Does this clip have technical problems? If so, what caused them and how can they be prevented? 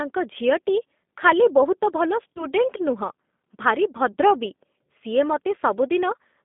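Yes. The speech is carried by the G.729 codec throughout. The sound is confined to roughly 200 Hz to 3.6 kHz, so it is thin and muffled. The rough, slightly synthetic texture is plainly audible. At 8 kbit/s, the decoder rebuilds speech from a vocal tract filter, a pitch predictor and a few pulses per frame instead of the actual waveform. To prevent this, use a wideband codec such as G.722 or Opus when the network allows it.

There is also VoIP packet loss concealed by the speech codec, from 2.35 to 2.46 s and from 4.12 to 4.17 s. Each gap fits about 20 ms of lost audio, likely a single packet. The decoder filled each gap by extending its last pitch and filter at falling gain. That leaves a brief buzzy or noise-like, smeared stretch, and the speech stays weak until the decoder recovers. To prevent it, improve network reliability or add jitter buffering and forward error correction.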